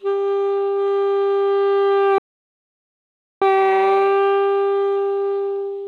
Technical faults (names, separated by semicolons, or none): playback stall